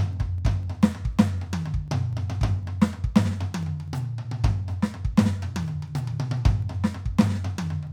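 Music, with periodic USB or driver dropouts running from 0.13 s to 7.87 s. Every 0.25 s a sliver of audio, about half a millisecond, is skipped outright. Something blocks the bus or driver on a fixed schedule. The result is about thirty evenly spaced ticks.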